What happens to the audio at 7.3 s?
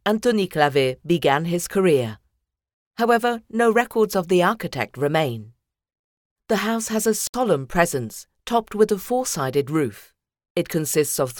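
At 7.27 s the sound drops out for about 67 ms, until 7.34 s, then resumes where it stopped: a gap at a join of encoded pieces, where encoder start delay and last-frame padding were left in. The waveform flatlines; the spectrogram shows a blank vertical band, its edges smeared.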